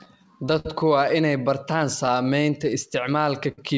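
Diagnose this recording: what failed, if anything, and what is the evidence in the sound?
Clock drift between sender and receiver, at the network and buffer stage. The sender's clock runs slow, by roughly 4 percent. Audio arrives a little slower than the receiver plays it out. The jitter buffer keeps draining. The receiver must pad the stream to keep playing. That shortfall drives the tempo edits below. The hiccups recur across the whole clip, at uneven spacing, through the G.722 call path with its band ending at 8 kHz.

Short stalls from a late packet, at the jitter buffer. The first runs from 0.60 to 0.66 s, just before "waa inay bartaan". The buffer ran dry, and the last sound was held for 52 ms. The second runs from 2.06 to 2.08 s, right after "waa inay bartaan", and holds for 16 ms. The third runs from 3.52 to 3.59 s and holds for 58 ms. Nothing is lost. Each stall is a held sound, followed by a resume from the same point.

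Repeated timing corrections, in the receiver's playout logic. From 2.22 to 3.21 s, just after "waa inay bartaan", small pieces are repeated to stretch the stream. Playback runs at 96 percent speed over that span. About 50 ms is added in total. The edits all go the same way but are unevenly spaced. Each edit is small.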